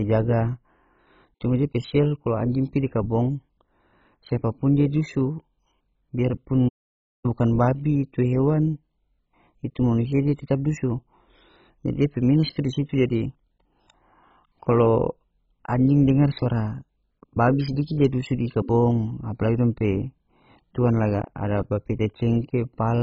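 From start to finish the speech sounds dull and gurgling, with a granular roughness and nothing above 7.5 kHz. This is MP2 compression, likely at a very low rate that fits about 16 kbps, where starved upper sub-bands are switched off and the remaining ones are coarsely quantised.

At 6.68 s the sound cuts out mid-flow for about 0.56 s, resuming at 7.26 s with "bukan babi itu hewan". This is a playback stall, likely the player running short of data or being blocked until output could continue.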